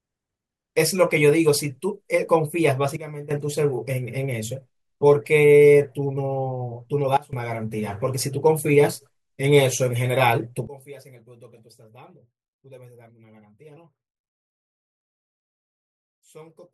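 At 2.97 to 3.31 s, 7.17 to 7.33 s and from 10.67 s to the end, sudden gain jumps drop the level by about 12, 19 and 23 dB, likely an unramped gain change; speech and background noise fall together instantly, unlike a fade or compressor.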